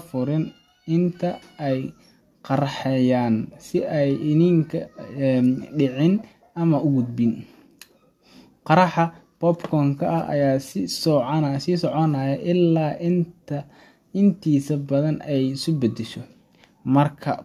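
No technical faults can be heard anywhere in the recording. Nothing in the sound points to a problem with how it was captured, carried or played back.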